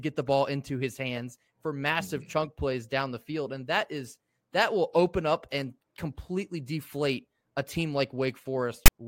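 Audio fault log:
8.86–8.88 s, file tags played as audio: a short burst of harsh, buzzing static with abrupt edges appears near the end of the clip, lasting about 21 ms. A block of text metadata has been read as audio samples. Character bytes fall within a narrow range of values, so the decoded waveform is a loud rasp sitting off-centre, pushed to one side of zero, and it cuts in and out with no fade.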